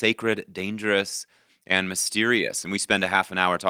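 No technical faults are audible.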